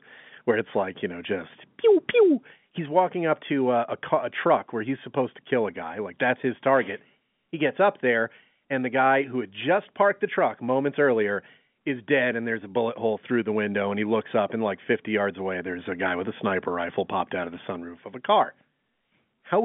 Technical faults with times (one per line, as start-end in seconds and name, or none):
none